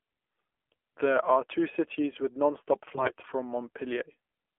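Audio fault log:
Throughout: AMR narrowband mobile codec. The sound sits between 300 Hz and 3.4 kHz. The coarse, buzzy, synthetic tone fits a low AMR-NB mode near 7.4 kbps. Few pulses per subframe drive the vocal-tract model, so the damage is plainly audible.
0.34–0.48 s and 2.94–3.12 s (the second right after "two cities with nonstop"): AMR bit errors. A rough few percent of the weakly protected bits are flipped. The misplaced excitation pulses and skewed gain and spectrum values turn the speech hoarse, scratchy and gargly, though its pitch and level hold.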